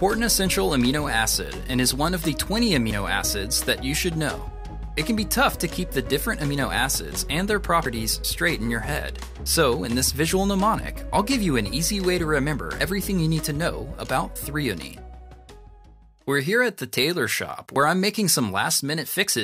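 The audio skips abruptly at 2.91, 7.86, 12.81 and 17.76 s. Each time, around 50 ms vanishes and the two sides butt together with no gap. The steady spacing points to audio missing between chunks, likely from 5-second recording blocks dropping samples at each handover.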